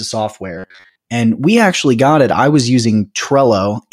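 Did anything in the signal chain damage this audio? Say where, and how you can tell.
Yes. From 0.58 to 0.97 s the speech becomes a rigid, metallic buzz at 93.8 Hz that follows the original only loosely. This is robotic sound from repeated short buffers, likely a starved driver buffer replaying roughly 11 ms chunks in place of most incoming audio.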